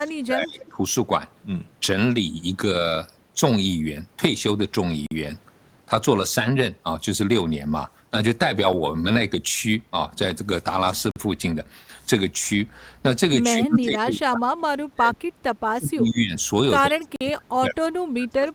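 From 0.0 to 0.8 s the speech dips by up to about 25 dB, which is speech suppressed in double talk, likely from an echo canceller ducking the near talker while the far side also spoke. On a waveform the envelope sags abruptly, and a spectrogram shows the upper bands thinning out.

Inside that stretch, from 0.59 to 0.69 s, a faint echo leak appears: a copy of the voice returns about 142 ms late and about 25 dB down, likely because a loudspeaker echo slipped past cancellation. A spectrogram shows a weak, smeared duplicate of the harmonic pattern, offset in time.

At 5.07 s and again at 11.11 s there is a gap between chunks: a hard-edged hole of about 48 ms repeating every 6 s, where a late-starting or padded chunk leaves silence at each join. The waveform drops to near silence, and the spectrogram shows a clean vertical blank stripe.

Speech suppressed in double talk returns from 13.54 to 15.17 s and from 15.74 to 16.35 s, with dips of up to about 30 dB, then from 16.86 s to the end, reaching about 35 dB. 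The speech fades and fragments, losing its high end. The same 48 ms chunk gap recurs at 17.16 s.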